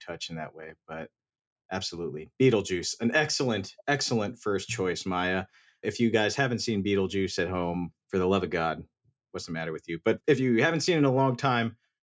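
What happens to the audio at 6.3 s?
Nothing goes wrong at 6.3 s; the speech continues intact through that moment, with no dropout, click, distortion or other fault to be heard.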